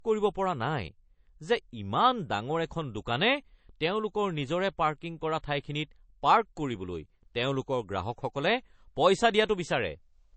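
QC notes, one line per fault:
Throughout: low-bitrate audio saved at a high bitrate. The speech has nothing above about 8.3 kHz, so it sounds dull and boxed in. Sibilants are softened. The likely cause is an MP3 made at a very low bitrate, around 32 kbit/s, then encoded again at a high one. The second pass keeps the missing top end and the artefacts. It cannot bring back what the first encoding discarded.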